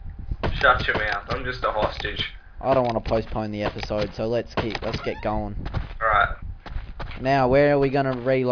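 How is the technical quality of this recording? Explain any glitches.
The technical quality holds up, with no glitches to explain.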